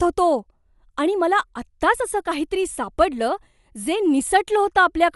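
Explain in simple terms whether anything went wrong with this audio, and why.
The speech sounds dull and rough throughout, with nothing above 11.5 kHz, likely from heavy Dolby Digital compression that replaced discarded detail with noise.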